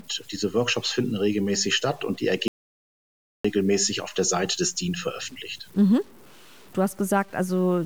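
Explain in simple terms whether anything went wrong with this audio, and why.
The whole speech clip sounds grainy and rough. This is low bit depth without dither. The sound seems to have been stored with very few volume steps, which fits 7-bit audio. The likely cause is that it was simply chopped down. The roughness follows the voice, and quiet parts sound worst.

There is also an audio dropout to silence from 2.48 to 3.45 seconds, almost one second. It starts right after "regelmäßig statt und die" and the sound returns at "auf der". The gap is total silence, with no background hiss. The input was likely lost while recording kept going, so that part of the speech is gone.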